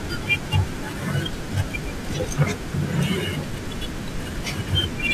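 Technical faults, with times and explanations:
Throughout, imaging from linear upsampling: the speech has a dulled top end with a faint metallic shimmer on sibilants, from a mirrored copy of the spectrum filling roughly 11 kHz to 22 kHz, about 25 dB below the speech. This fits a rate raised from 22 kHz to 44.1 kHz by straight-line interpolation, which smooths the top of the band but filters poorly above it. Aliasing would instead fold energy downward, giving inharmonic tones inside the band.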